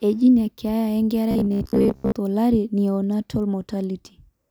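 From 1.31 to 2.16 s the speech turns into robotic sound from repeated short buffers: a stiff 66.8 Hz buzz, likely from an about 15 ms chunk looping while most of the real audio was skipped.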